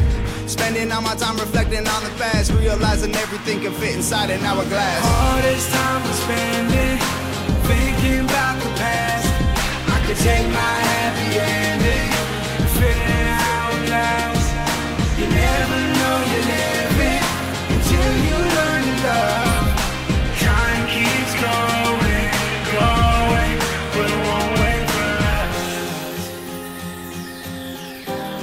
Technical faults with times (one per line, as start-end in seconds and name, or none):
5.15-5.19 repeated frames